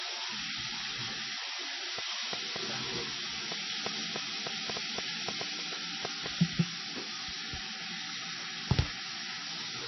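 Heavy MP3 compression runs throughout. Nothing survives above about 5.9 kHz, and weak detail flickers, giving a watery, swirly texture. A very low bitrate is the likely cause.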